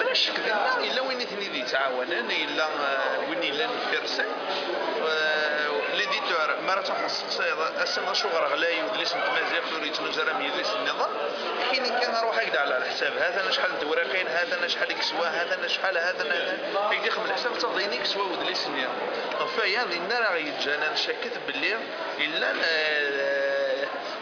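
Nothing in the recording stood out as a technical problem on listening.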